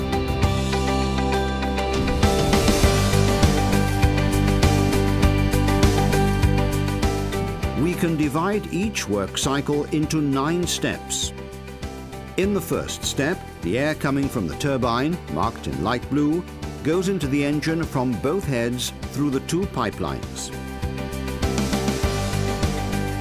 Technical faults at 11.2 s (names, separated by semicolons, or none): none